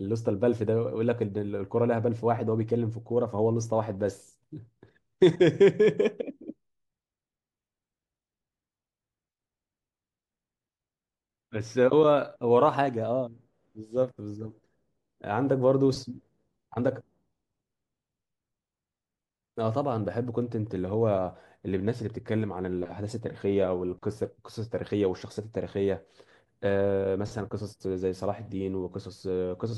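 No technical faults are audible.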